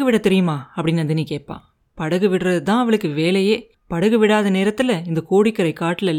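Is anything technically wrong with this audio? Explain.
No, nothing technically wrong can be heard here.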